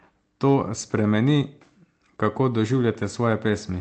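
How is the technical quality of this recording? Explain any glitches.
The technical quality of this speech recording is sound, and there are no glitches to explain.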